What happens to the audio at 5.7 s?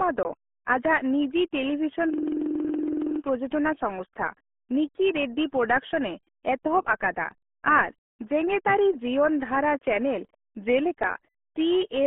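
At 5.7 s the speech is still passing through the RealAudio 14.4 codec, as it does across the whole clip. The heavy squeeze, consistent with about 8 kbit/s, strips everything above 3.8 kHz, leaving muffled, gargly speech.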